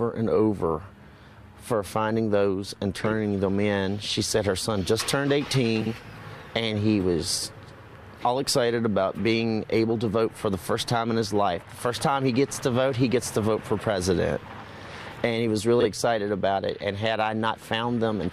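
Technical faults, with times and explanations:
5.81–5.92 s and 15.80–15.85 s, frames out of order: a brief garbled flutter. Two adjacent blocks were decoded in swapped order, 46.4 ms each in the first stretch and 23.2 ms in the second. No time is lost.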